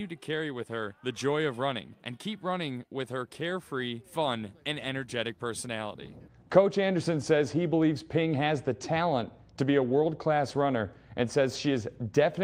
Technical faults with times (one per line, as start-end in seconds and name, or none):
none